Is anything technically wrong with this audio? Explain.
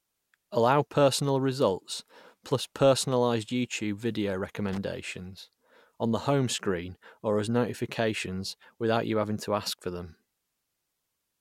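Yes. From 4.69 to 4.78 s there is loose connector crackle: a worn or dirty contact somewhere in the signal path briefly makes and breaks, chopping the speech, heard as an irregular scratchy burst lasting about 90 ms.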